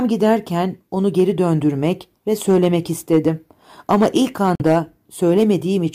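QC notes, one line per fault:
2.49–2.67 s, 3.13–3.28 s and 3.91–4.78 s, hard clipping: the loudest parts of the speech are pushed past what a stage can carry, by about 2 dB, 4 dB and 5 dB in turn, so their peaks are cut flat. Those squared-off tops create harmonics high up the spectrum, heard as distortion tied to the loud moments. Unlike codec artefacts, it tracks level: it appears on the peaks and stops as soon as the level drops back.
4.55–4.62 s, Bluetooth dropout: the sound cuts out, with roughly 46 ms missing, which fits a couple of lost packets, most likely from a wireless link that failed to deliver audio in time. When it comes back, the speech carries on further along, as though it had kept playing through the hole. A buffer stall, by contrast, would resume where it stopped. The gap falls inside the third clipping run.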